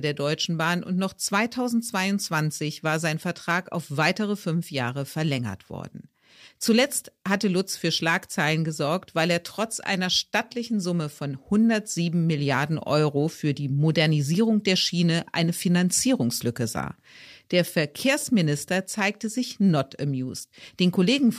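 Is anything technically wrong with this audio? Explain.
Yes. There is a repeated buffer from 18.21 to 18.23 s. New audio arrived late, so a 10 ms slice played twice more, with nothing skipped. Each repeat begins with a hard join. With so small a buffer, it sounds like a brief click or buzz.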